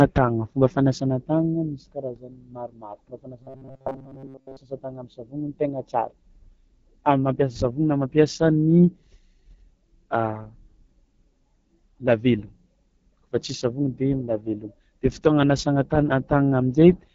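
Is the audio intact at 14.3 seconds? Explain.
No. At 14.3 seconds the speech carries the AMR wideband (HD Voice) codec damage that runs through the whole clip. The codec models the voice as pulses through a vocal-tract filter up to 6.4 kHz and fills the band above with shaped noise, and nothing reaches past 7 kHz. The rough, raspy texture fits a low rate like 8.85 kbit/s. The wider band up to about 7 kHz separates it from narrowband phone coding, which is muffled.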